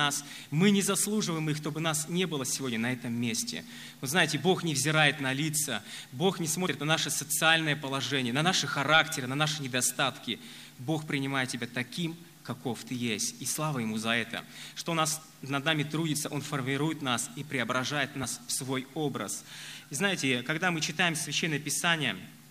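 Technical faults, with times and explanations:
6.65 s, compressed frames skipped: the decoder never outputs a short run of coded frames, roughly two of them, which fits a frame length near 26.1 ms. The audio jumps ahead by about 50 ms, and overlapping neighbouring frames smear the join into a brief blip, not a sharp click.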